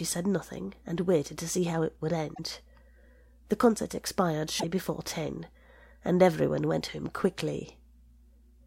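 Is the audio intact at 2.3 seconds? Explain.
No. From 2.31 to 2.39 s there is damaged data in the compressed stream: the decoder hits corrupted frames it cannot read correctly, loses sync and hunts for the next valid frame header. In the speech, this is a brief chirp or squawk.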